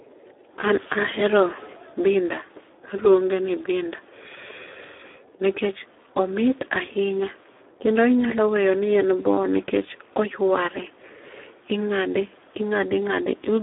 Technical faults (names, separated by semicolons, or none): Speex codec